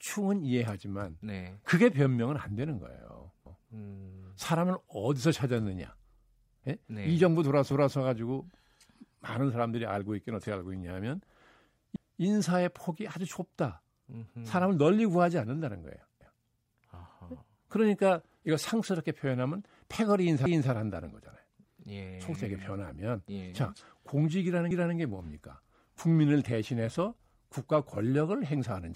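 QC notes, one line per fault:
3.46, 7.71, 11.96, 16.21, 20.46 and 24.71 s: overlapping chunks. At each join, 250 ms of speech plays twice. The audio was cut into 4 s chunks, and each chunk began before the last one ended. The result is a stutter every 4.25 s.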